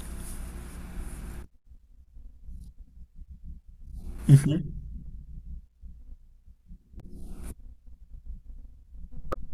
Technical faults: damaged data in a compressed stream

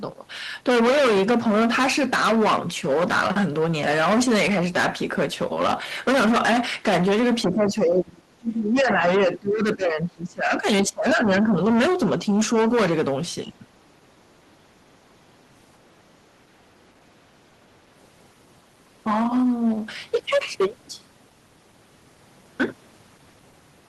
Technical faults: hard clipping; speech suppressed in double talk

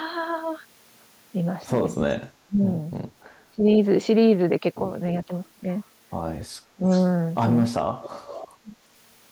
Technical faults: speech suppressed in double talk; echo leak

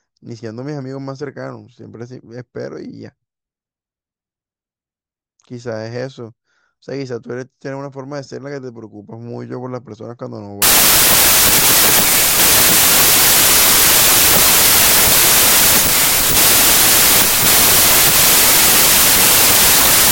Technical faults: wrong sample width

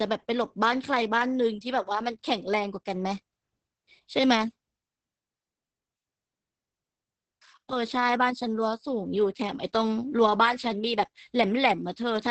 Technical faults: Opus voice compression

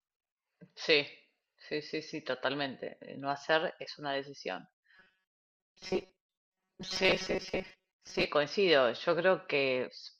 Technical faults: robotic sound from repeated short buffers

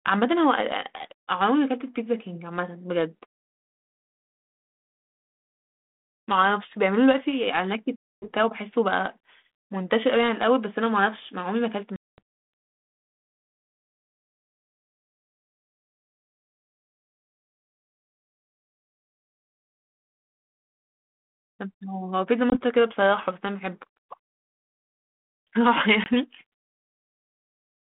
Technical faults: packet loss on an ADPCM call

